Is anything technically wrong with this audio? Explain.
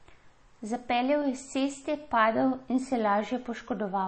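Yes. Throughout the speech, nothing is present above 8.3 kHz, and the sound has a plainly audible watery, swirly quality. This is likely MP3 compression at a low bitrate, around 32 kbps. The encoder runs short of bits, so it cuts the treble at a fixed point and drops weak frequency lines that flicker on and off between frames. A plain low-pass filter would only dull the top end; the shifting, chirpy swirl marks a codec.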